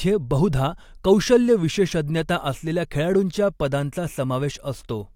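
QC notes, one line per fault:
Nothing stood out on listening.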